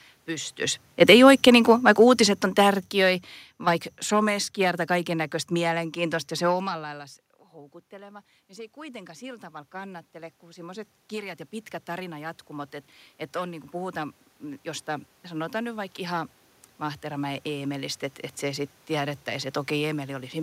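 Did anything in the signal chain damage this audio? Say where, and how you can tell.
Yes. Automatic gain falling: in the call processing stage, the gain control cut its gain by about 15 dB between 0.91 and 4.85 s, so speech and room noise sink together.

Automatic gain rising: after the talker moved back around 6.5 s, the gain control raised its gain by about 12 dB from 6.66 to 12.79 s, swelling speech and background together.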